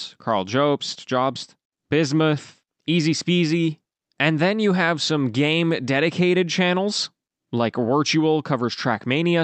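Listening to this speech recording, nothing stood out as a technical problem.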